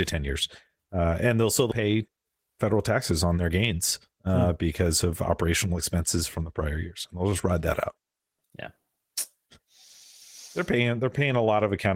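At 1.71 to 1.73 s the speech jumps forward with a skip ahead. Roughly 0.7 s of audio was discarded while later audio already sat waiting, and the two sides are butted together with no silence or fill in between. This differs from a dropout, which leaves an audible hole. Here nothing pauses; the sentence simply lurches onward, with material missing across the join and an abrupt change in where the speech is.

From 1.81 to 4.27 s comes a jitter buffer speed-up. The buffer was still holding more audio than its target, so the receiver trimmed it down by repeatedly cutting out short pitch-period-sized slices, about 300 ms in all. The speech runs at roughly 112% speed and sounds hurried while its pitch stays where it was, which tells it apart from a resampling or clock fault, where voices also rise in pitch.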